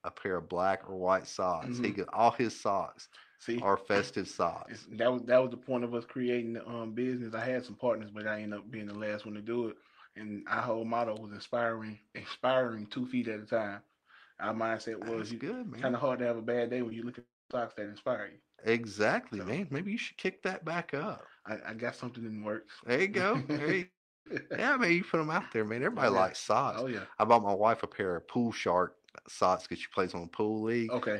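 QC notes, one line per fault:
16.89–16.93 s, short concealed packet loss: about 20 ms of audio never reached the decoder, so the receiver stretched the preceding sound across the hole and blended back in, leaving a brief smear or wobble. Unlike a dropout, there is no audible gap or silence.
17.19–17.52 s and 23.82–24.28 s, long network dropout: the audio is likely cut by a network outage of about 0.32 s and 0.44 s. A fading continuation of the last sound gives way to silence for about 0.22 s and 0.34 s, and the audio then resumes with that stretch missing rather than smeared over.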